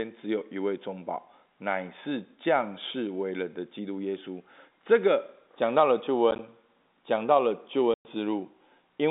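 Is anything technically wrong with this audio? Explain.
Yes. There is packet loss filled with silence. Packets failed to arrive and the receiver inserted silence in their place. Between 6.31 and 6.39 s, about 30 ms drops out in short gaps spread over 80 ms, each no longer than 10 ms, which fits 10 ms packets. From 7.94 to 8.05 s, a solid 110 ms hole with hard edges cuts the sound off. The audio arrives over G.711 telephone coding, which limits it to roughly 200 Hz to 3.7 kHz.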